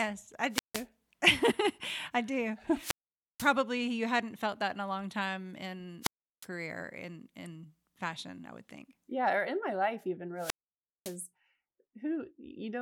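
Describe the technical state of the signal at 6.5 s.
At 6.5 s the signal is just recovering from a wireless microphone squelch dropout that runs from 6.01 to 6.47 s. The FM radio link weakens, hiss swells briefly, and the receiver's squelch then gates the output to near silence for about 0.36 s before the speech comes back. That short rise of static ahead of the hole distinguishes it from a digital dropout or packet loss, which cuts off abruptly without any preceding noise.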